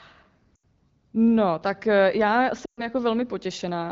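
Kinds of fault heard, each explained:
Lost AMR speech frames: the decoder smears and fades the last good sound instead of cutting off abruptly, at 0.55 s and after "tak eh já".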